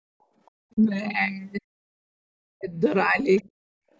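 Right at 0.46 to 0.51 s there's a faint scrap of another voice, what I'd call the other side's voice leaking through. It sits very low, something like 40 dB under the talker, so it's more a ghost than a voice. That's likely the far end coming out of the loudspeaker and slipping past the echo canceller. The same thing shows up again at 3.37 to 3.42 s, a touch louder but still well buried, roughly 35 dB down.

The bigger recurring issue is speech suppressed in double talk, which hits at 0.73 to 0.79 s, 1.60 to 1.64 s, 2.56 to 2.75 s, 3.05 to 3.20 s and 3.42 to 3.48 s. Each time the talker's level sags or drops out briefly. The cuts at 1.6 s and 2.56 s are really deep, around 40 dB, and the one at 2.56 s lasts about a fifth of a second, so it sounds like the voice just vanishes. The others are gentler, from a slight dip near 3.05 s to a clear hole at 0.73 s. The likely cause is both ends talking at once, with the canceller unable to tell its own talker from the echo and clamping down on everything.

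Finally, at 3.76 to 3.86 s the background gets gated by the echo canceller: the room tone drops by about 36 dB for around a tenth of a second and then comes back. The canceller slammed the mic down while the speaker was active and then let go. The band stops at 8 kHz, which is just the call's normal mic processing.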